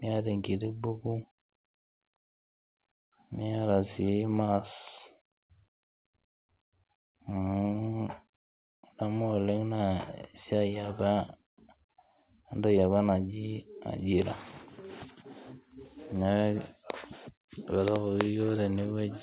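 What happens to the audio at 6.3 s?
Nothing goes wrong at 6.3 s; the speech passes intact through the call path, where the G.711 mu-law narrowband coding leaves nothing above 4 kHz.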